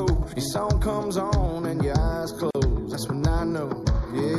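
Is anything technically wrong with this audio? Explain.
Yes, the audio has two faults: comb filtering from a channel delay throughout, and a gap at a join of encoded pieces.

Channel delay (comb filtering), present for the whole clip: one channel is late by roughly 0.2 ms relative to the other, and when the two are summed to mono, the content they share cancels at evenly spaced frequencies. The first notch falls around 3 kHz, with further notches repeating above it. These fixed holes in the upper spectrum make the sound hollow and phasey, taking the edge off its upper-mid detail.

Gap at a join of encoded pieces, from 2.51 to 2.55 s: a silence of about 41 ms opens in otherwise continuous sound, and then the audio resumes from where it stopped. This happens when segments are encoded separately and concatenated without trimming. Each encoder pass adds its start-up delay as silence and pads its final frame, so the join carries dead time. 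The codec smears the gap's edges, so the fully silent part is shorter than the whole gap.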